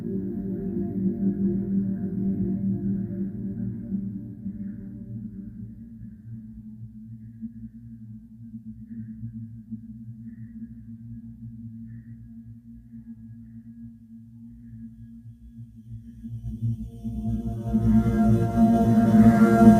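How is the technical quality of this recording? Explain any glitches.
The main problem runs the whole length of the clip: a noise suppressor applied to music or sounds, when it was tuned for speech. It treats anything steady, like sustained tones, room ambience and reverb tails, as noise and pulls it down, by about 10 dB at the deepest. Sharp onsets get through fairly intact, but anything held sinks a moment later, so the level pumps and flutters and the decays sound clipped and thin.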